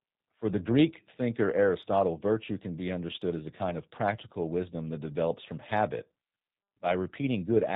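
From start to finish the speech carries plainly audible G.729 codec damage. The 8 kbit/s coder rebuilds each frame from a vocal tract filter, pitch predictor and a few pulses, so nothing above 4 kHz survives, leaving a muffled, slightly rough, synthetic quality.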